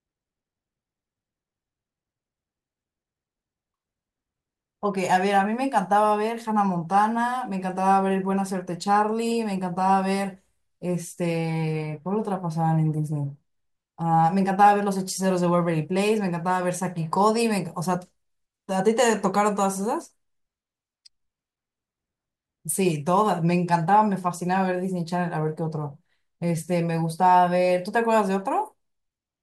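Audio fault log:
No fault is heard anywhere in this speech clip. There is nothing to enter in the log.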